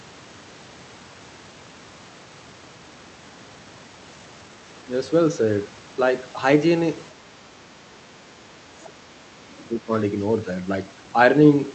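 From 7.13 to 9.1 s the speech sinks by roughly 30 dB at its deepest, about two seconds in all. This is speech suppressed in double talk: the echo canceller likely mistook overlapping talk for echo and turned everything down. On a spectrogram the speech energy fades and breaks into gaps, and the waveform envelope collapses.

Near the end of that stretch, at 8.85 to 8.9 s, and again at 9.58 to 9.66 s, faint scraps of the other side's voice leak through at about 30 dB below the speech. This is likely loudspeaker echo that the canceller left behind. They appear as brief, low-level smudges on the spectrogram.

A second, shallower suppression follows from 9.74 to 9.91 s. It dips the speech by about 15 dB and shows as a short notch in the waveform.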